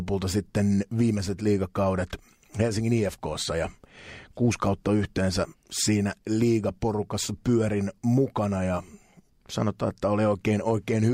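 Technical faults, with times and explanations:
No technical faults can be heard anywhere in the speech recording.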